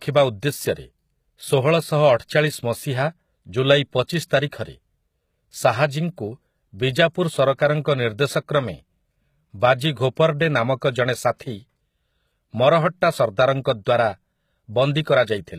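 Throughout the speech, plainly audible codec damage leaves the treble rebuilt rather than real: s sounds turn gritty and lispy, consistent with HE-AAC compression at a low bitrate, likely near 20 kbps. A spectrogram shows copied-looking upper bands with mismatched harmonics and nothing above 14.9 kHz.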